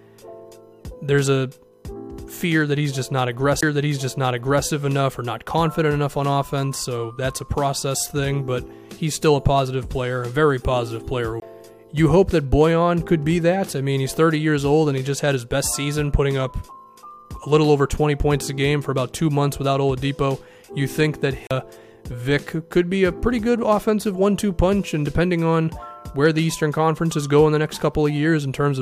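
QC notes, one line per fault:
3.61 s, 11.40–11.42 s, 21.47–21.51 s: CD skip. The laser jumps tracks, so each shows a tick, a very short mute, then audio resuming elsewhere. On the waveform there is a brief near-flat gap with abrupt edges, and the spectrogram shows a vertical broadband line and a discontinuity.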